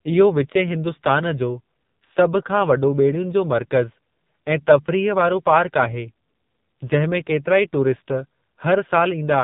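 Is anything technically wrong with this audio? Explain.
Yes. Throughout, a low-rate AMR narrowband mobile codec, fitting its 5.9 kbps mode, cuts everything above 3.8 kHz and models speech crudely, leaving it buzzy and synthetic.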